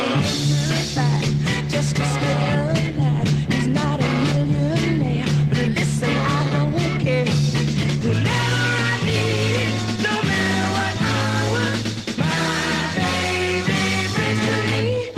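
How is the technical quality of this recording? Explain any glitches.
Nothing stood out on listening; no glitches or technical problems were heard anywhere in the recording.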